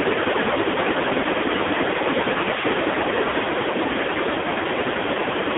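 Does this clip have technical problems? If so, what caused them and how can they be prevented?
Yes. Throughout, the speech sounds buzzy, thin and synthetic, squeezed into roughly 250 Hz to 3.6 kHz with nothing above. This is the AMR narrowband mobile codec at heavy damage, rebuilding the voice from a crude vocal-tract model with very few pulses, which fits a low mode near 5.9 kbps. Prevention: carry the call on a wideband codec such as AMR-WB or EVS, or at a higher AMR mode.

From 0.54 to 0.57 s there is a brief dip and warble in the sound. This is a lost AMR speech frame: the decoder bridged the gap by repeating the previous pitch and vocal-tract settings at reduced gain, consistent with a single missing 20 ms frame. Prevention: improve radio coverage or signal strength so fewer frames fail their checksum.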